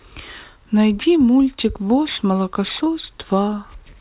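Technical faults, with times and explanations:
Throughout: aliasing. Energy in the speech above 4 kHz has folded back below 4 kHz instead of being removed, which points to a drop from a 16 kHz to an 8 kHz sample rate with no anti-alias filter first. Fricatives and sibilants pick up a gritty, metallic edge at pitches unrelated to the originals. The mirrored content sits roughly 15 dB under the speech, and the spectrum runs at full strength right up to the 4 kHz band edge.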